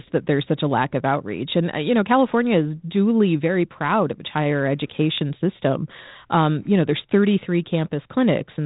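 The clip is speech with one loud pop. It comes right after "proud of its higher", from 5.18 to 5.20 s. It is a single sharp click, roughly 10 dB above the speech, and the talking carries on underneath. A sudden voltage spike, likely from a switch or static, is the cause. The audio is band-limited by G.726 ADPCM at 32 kbit/s, with nothing above 3.8 kHz.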